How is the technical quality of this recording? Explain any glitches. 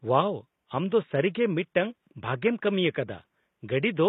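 Codec damage is plainly audible across the whole speech clip, with room noise about 55 dB below the speech. Throughout, the treble sounds likely rebuilt by HE-AAC compression, consistent with a very low bitrate near 20 kbps. Copied lower bands make s sounds gritty and metallic, unlike a simple low-pass, which would sound dull instead.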